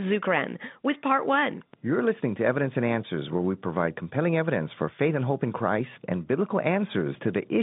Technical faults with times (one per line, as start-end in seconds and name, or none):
none